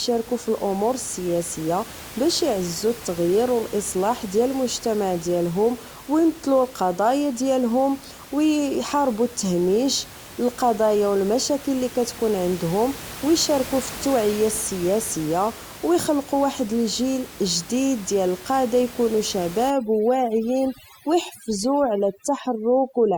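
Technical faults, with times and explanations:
19.70–23.18 s, overdone noise removal: the room noise, about 17 dB below the speech earlier, drops and breaks up into twinkling specks. Bands near the noise estimate are cut away, quiet speech parts too; unlike codec damage, the background drops and breaks into specks.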